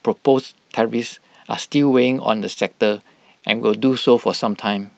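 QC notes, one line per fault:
2.53–2.59 s, short stall from a late packet: a sound is held 27 ms too long because the empty jitter buffer stretched audio until the packet arrived, then resumed losing nothing.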